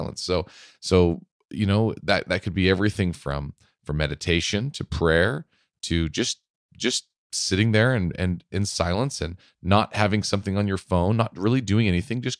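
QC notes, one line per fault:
Nothing to flag on this one; the speech runs without any faults worth a line.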